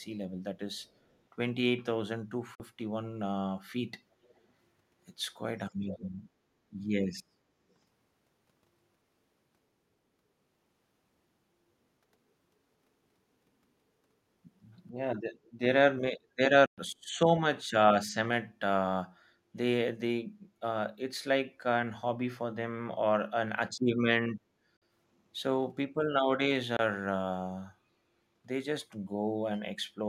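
Echo leak at 0.74 to 1.16 s: a faint copy of the speech returns about 393 ms late, likely because a loudspeaker-side echo canceller let some of its microphone pickup through and sent it back. It recurs, still quiet, at 4.23 to 4.4 s, and much louder at 5.69 to 6.09 s.

Bluetooth dropout at 2.55 s: the sound cuts to silence for 46 ms, then resumes further on as if it had kept playing, likely from packets reaching the headphones too late and being discarded. Further gaps follow at 16.66 s (116 ms), 24.77 s (46 ms) and 26.77 s (23 ms).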